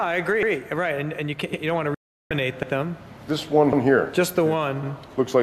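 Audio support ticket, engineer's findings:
Overlapping chunks. Chunker starts each block before the previous one ends; blocks 1.0 s apart, roughly 100 ms of overlap. Symptom: the same 100 ms replays at each join, heard as a short stutter or click, at 0.43, 1.53, 2.63, 3.73 and 4.83 s. Even 1.1 s spacing points to a fixed-size buffer or framing stage, not the source.

Digital broadcast dropout. Receiver lost lock or rejected corrupt frames and muted until valid frames resumed. Symptom: sound fades out in about 3 ms at 1.94 s, silent for 360 ms, returns at 2.31 s. The silence fits about 15 lost frames of roughly 24 ms each. Content from that gap is gone, not delayed.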